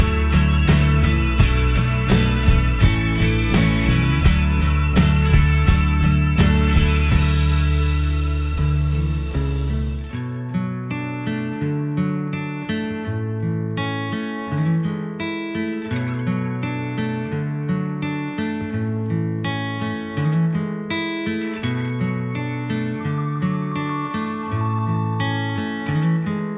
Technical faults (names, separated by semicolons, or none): none